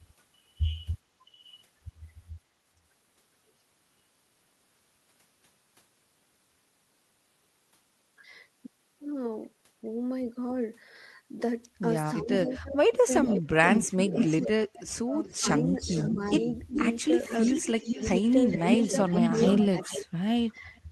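From 12.22 to 16.79 s, both sides were likely talking at once, and the echo canceller could not separate the local talker from the loudspeaker echo, so it turned both down. The speech dips in pieces by up to about 25 dB, losing about two seconds in total.

Inside that stretch an echo leak begins: a loudspeaker-side echo canceller likely let part of its microphone pickup through. A delayed copy of the speech returns about 0.42 s late. There is a brief scrap at 12.48 s, about 15 dB below the speech, then longer stretches from 12.96 to 14.46 s and from 15.24 to 20.04 s, only about 5 dB down.

Speech is suppressed in double talk again from 19.2 to 20.33 s. This time it drops deeper, by up to about 35 dB, and about half a second is cut out.

A last faint echo, about 30 dB down, trails from 20.55 to 20.81 s.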